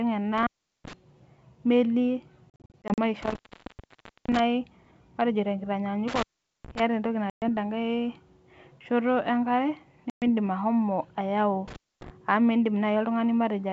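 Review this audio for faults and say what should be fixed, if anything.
Intermittent contact at 0.38–0.93, 3.22–4.39, 6.08–6.80 and 11.68–12.10 s (right after "ashomo ayau"): a loose plug opens, so the speech drops out for 0.25–0.93 s, with crackle at each edge and faint hiss underneath. Reseat or replace that cable and connector.

Packet loss on an ADPCM call at 2.50–2.99 s (240 ms of scattered holes, none longer than 40 ms), 7.30–7.43 s, and 10.10–10.23 s just before "ashomo ayau": the gaps are hard-edged silence. Afterwards the decoder's predictor is out of step with the sender's, so the speech comes back slightly distorted and settles within tens of milliseconds. Get the call onto a steadier network path, and add packet-loss concealment with decoder state resync.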